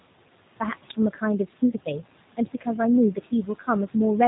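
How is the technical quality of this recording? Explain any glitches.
Quality is limited by two constant faults and two short dropouts, all from call processing rather than the recording itself.

Noise suppressor artifacts run throughout: the suppressor pulls the steady room noise down by about 18 dB between phrases, so the residue pumps as it reopens under speech.

G.729 codec damage is plainly audible for the whole clip. At 8 kbit/s it models speech from a filter and pitch predictor, cutting everything above 4 kHz and leaving a rough, synthetic edge.

Speech cut by the noise suppressor occurs at 1.13–1.22 s and 3.15–3.68 s, with drops of about 11 dB. The suppressor mistook softer speech for noise, swallowing roughly 100 ms and 150 ms of sound respectively.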